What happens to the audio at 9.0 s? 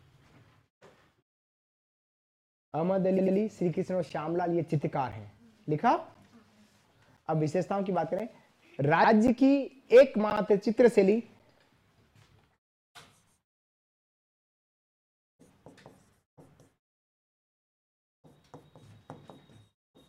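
Right around there you've got repeated frames: from 9.04 to 9.10 s a 64 ms chunk, which fits a couple of compressed frames, gets played a second time. You hear a quick stutter, and the audio runs 64 ms longer.

That moment also sits inside a run of periodic USB or driver dropouts, from 4.09 to 11.40 s. Something stalls the audio path every 1.02 s and roughly 10 ms goes missing each time, replaced by silence. That's about seven evenly spaced ticks that only show up while there's sound playing.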